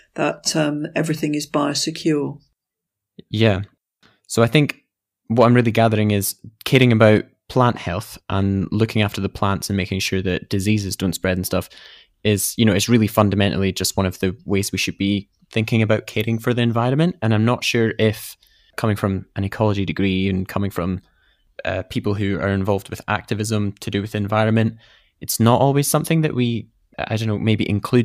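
At 5.41 to 5.43 s, 6.75 to 7.05 s and 13.18 to 13.22 s the speech shows hard clipping: peaks overdrive a stage by about 2, 3 and 2 dB and are sliced flat at its ceiling. The first and last bursts are brief crackles, while the longer 6.75 s stretch crackles on its peaks too. On a waveform the tops sit on a flat line. A spectrogram shows vertical smears of harmonics reaching well up into the high kHz.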